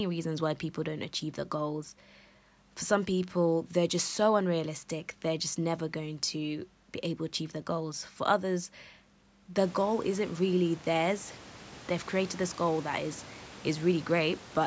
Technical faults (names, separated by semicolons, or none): none